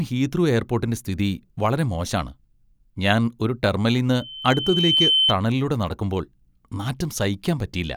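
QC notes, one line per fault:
4.12–5.34 s, loudspeaker feedback squeal: the mic re-amplifies its own loudspeaker, so a 3.1 kHz tone swells over about a second after "ഞാൻ ഒരു" until it sits roughly 5 dB above the speech.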